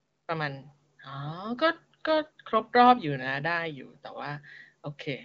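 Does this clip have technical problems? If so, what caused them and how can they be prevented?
No, there are no technical problems in this clip.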